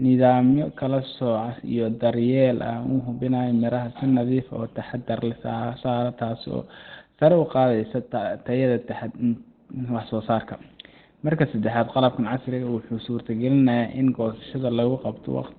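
From start to finish the speech sounds muffled and hoarse, with nothing above 4.2 kHz. On a spectrogram that shows as a flat ceiling with empty space above it. The likely cause is Opus compression in its narrowband speech mode, at a rate that fits around 16 kbps.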